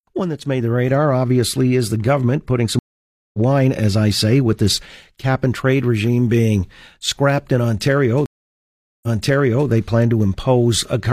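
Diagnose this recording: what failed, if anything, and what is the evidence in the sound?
A network stream reconnect happened twice: the connection dropped and the player restarted its decoder mid-stream. At 2.79 s, after "is the government putting", 0.55 s of silence precedes "wine as I say", skipping roughly 0.4 s. At 8.26 s, 0.77 s of silence resumes 0.65 s earlier, repeating sound.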